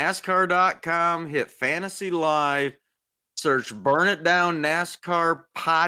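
Nothing technical goes wrong anywhere in this bit of speech, so there's honestly nothing here to flag.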